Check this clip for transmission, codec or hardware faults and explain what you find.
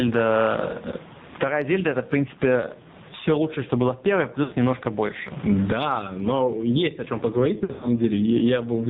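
Yes, there are a few problems: pumping level, heavy mobile-codec damage, and two dropouts.

Gain pumping runs through the whole clip. The background swells in the pauses and ducks by roughly 20 dB under each loud syllable, most likely from input gain set too high with a fast limiter clamping it.

The AMR narrowband mobile codec cuts everything above 4 kHz. The thin, buzzy, synthetic sound fits a very low bitrate, around 5.9 kbps.

Lost AMR speech frames appear at 4.44 to 4.54 s, where the sound smears briefly. The decoder repeated its last good settings at falling gain for about 80 ms, which fits four 20 ms frames.

More lost frames hit at 7.58 to 7.88 s, scattered over about 240 ms with the longest run about 60 ms. The result is a warbly, drawn-out dip that comes back rough.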